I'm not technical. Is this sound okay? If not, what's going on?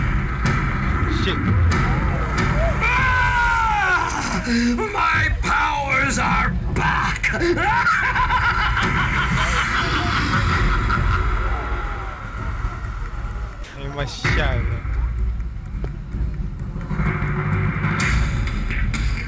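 No. At about 13.64 s the sound drops out for roughly a tenth of a second and steady hiss fills the gap, likely sound dropped by the voice detector after it mistook the audio for background. The call path also cuts off everything above 8 kHz.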